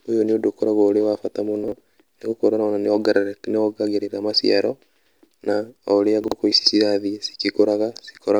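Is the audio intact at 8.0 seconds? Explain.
Yes, the speech at 8.0 seconds is intact, with no dropout, click, distortion or other fault to be heard at that moment.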